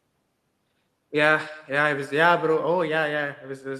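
A speech recording suffers from echo with no canceller, present throughout: at the far end the call is played on a loudspeaker, the microphone there picks it up again, and nothing strips that pickup out before it travels back. Every phrase is therefore trailed, roughly 300 ms later, by a faint second copy sitting about 24 dB below the direct speech, thinner than the original, giving a persistent doubled quality.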